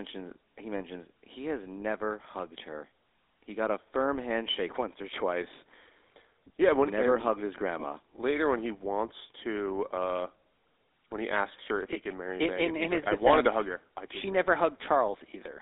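From start to end, the speech carries the damage of the GSM full-rate codec. The codec rebuilds the voice from a vocal-tract model excited by sparse, evenly spaced pulses, leaving a buzzy, gravelly roughness that is plainly audible, and its character fits the 13 kbps full-rate scheme. The line band runs from 300 Hz to 3.7 kHz, so a spectrogram shows energy abruptly ending at both edges, with coarse, smeared harmonics between.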